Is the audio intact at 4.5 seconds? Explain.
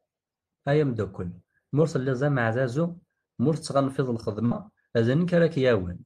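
No. A burst of packet loss runs from 4.45 to 4.54 s, just after "ameɛdazu ma ur tettɣanfiḍ". Several consecutive packets never arrived in time, so the receiver stretched the last received sound for about 54 ms, fading it, then skipped ahead, leaving about 60 ms of speech missing. It is heard as a brief held, dying sound before an abrupt jump. A spectrogram shows smeared bands that dim, then a hard vertical edge; the waveform shows a decaying stretch followed by a discontinuity.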